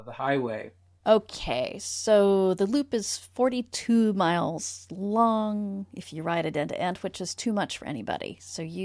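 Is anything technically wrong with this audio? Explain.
No, nothing technically wrong can be heard in this speech recording. There are no faults to describe at any point in it.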